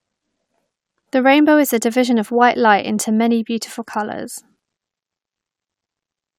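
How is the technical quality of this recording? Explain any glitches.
Nothing in the recording stood out as a technical problem on listening.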